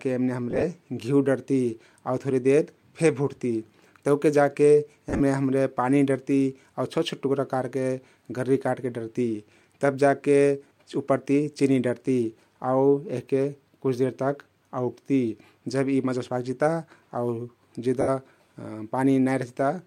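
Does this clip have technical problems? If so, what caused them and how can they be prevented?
Yes. Lost LE Audio frames at 0.51–0.64 s, 5.10–5.21 s, 10.68–10.71 s (just before "उप्परती चिनी डरती") and 18.01–18.09 s make the speech briefly smear into noise, because the LC3 decoder fills the gaps by replaying the last spectrum with random signs. A stronger Bluetooth link, with shorter range and less radio interference, prevents this.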